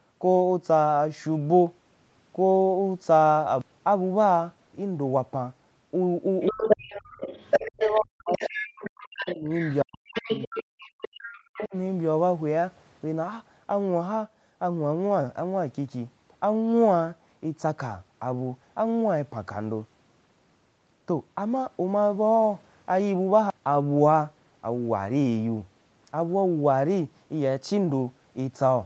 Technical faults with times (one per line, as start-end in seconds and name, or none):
6.40-8.01 other side's voice leaking through
6.51-6.90 speech suppressed in double talk
7.61-8.70 speech suppressed in double talk
8.32-9.75 other side's voice leaking through
9.04-9.52 speech suppressed in double talk
9.83-10.98 speech suppressed in double talk
10.14-11.68 other side's voice leaking through
11.50-11.74 speech suppressed in double talk